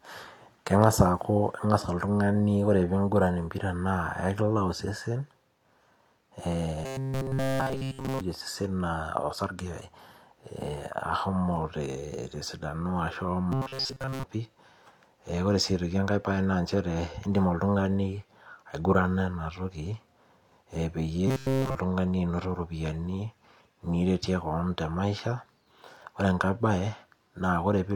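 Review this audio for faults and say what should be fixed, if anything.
A rigid metallic buzz near 133 Hz runs through the speech at 6.84–8.21 s, 13.52–14.24 s and 21.28–21.75 s. This is robotic sound from repeated short buffers, likely from a 7.5 ms block being looped while fresh audio is skipped. Fix this by giving the playback or network path enough buffering that new audio always arrives before the current block runs out.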